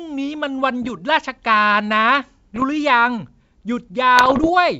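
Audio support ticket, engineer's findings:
Bit errors on an ADPCM link. Pops and rough, gritty bursts with brief level jumps at 0.83–0.98 s, 2.55–2.64 s and 4.16–4.51 s. The last is longest. Error rate around one percent, about 0.7 percent in the middle burst. Probable component: the ADPCM transmission path, here wideband G.722 at 64 kbit/s. Each flipped bit corrupts the decoder's step size and predictor, so the damage rings on for milliseconds past the error itself.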